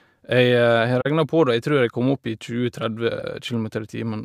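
Speech with two bitstream faults of different character. From 1.01 to 1.06 s, just before "på det og jeg", there is a corrupt frame concealed: the decoder detected damaged data and covered it, spanning about 58 ms, which fits two lost frames filled by muting or a scrambled repeat of the last good spectrum. What sets it apart from its sibling fault is that nothing new is added. From 3.19 to 3.23 s comes a corrupt frame decoded. Here the damage went unnoticed, and the decoder played the misread gains and codes as if they were valid, so energy lands at wrong frequencies and produces a short burst of error peaking at about -20 dBFS. Its length suggests roughly one frame. Unlike the earlier concealment, this one is heard as an added foreign noise.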